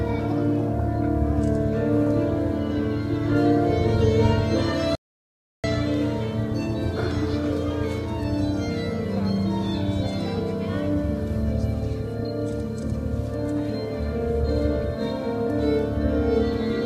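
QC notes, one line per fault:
4.95–5.64 s, audio dropout to silence: the sound stops abruptly and about 0.69 s of digital silence follows before it resumes mid-flow, with no room tone in the gap, likely from the input being lost while zeros kept being written. The waveform shows a flat line, and the spectrogram a fully blank vertical band with hard edges.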